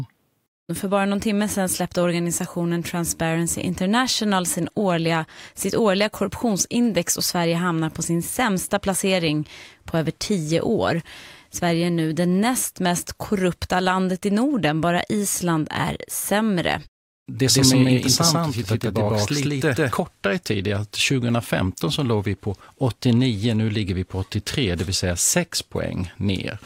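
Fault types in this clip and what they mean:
Doubled audio track: from 17.49 to 19.93 s the speech gains a second, equally loud copy trailing roughly 150 ms behind, dry and full-band, switching in and out abruptly. This is likely the same audio captured again through a slower path and mixed in.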